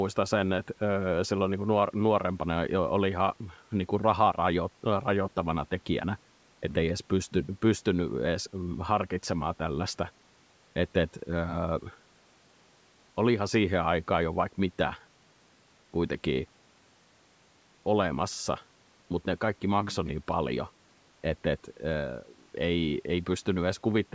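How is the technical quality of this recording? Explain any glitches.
Nothing stood out as a glitch on listening; the speech comes through the usual call microphone processing, with the lowest bass trimmed and no content above about 8 kHz, as expected for that path.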